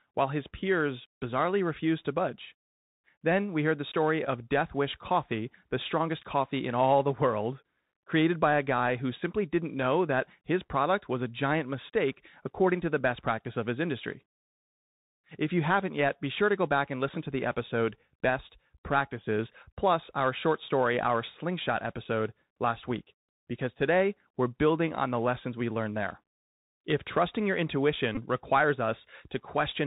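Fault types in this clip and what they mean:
Bluetooth CVSD headset codec: The whole thing goes through the narrowband headset codec, so there's nothing above 4 kHz. Step-size slope overload roughens the louder, brighter moments, the s sounds come out scratchy, and a grainy hiss sits under the speech the entire time.
Bluetooth headset packet repeated: There are two short dropouts where the headset decoded the previous packet again in place of lost ones, at 4.25–4.29 s and 28.15–28.19 s. Each produces a brief buzz near 267 Hz. They cover about 11 ms and 19 ms, which fits three and five lost packets.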